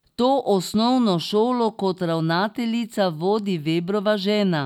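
No technical faults are audible.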